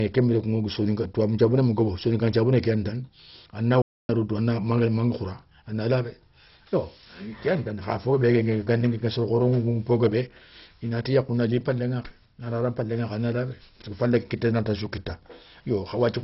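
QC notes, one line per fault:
Throughout: MP2 compression. The speech is dull and gurgling. Starved upper sub-bands are likely switched off, which points to a low bitrate around 32 kbps.
3.82 to 4.09 s: playback stall. The speech cuts to silence for about 0.27 s, then resumes at "rodou a na manga", most likely because the player ran out of buffered data.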